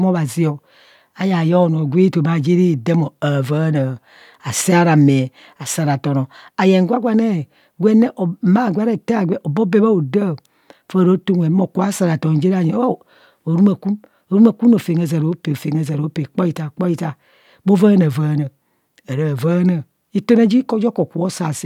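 No technical faults can be heard anywhere in this recording.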